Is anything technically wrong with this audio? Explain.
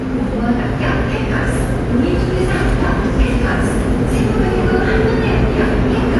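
Yes. Throughout the audio there is plainly audible damage consistent with AAC compression, likely AAC-LC at a low bitrate, with the sound pointing to roughly 32 kbps. Nothing is present above 11.5 kHz, so the top end sounds dull, and sustained sounds carry a smeared, warbling, fizzy texture where the encoder has quantised the spectrum coarsely. On a spectrogram this shows as a hard ceiling at 11.5 kHz.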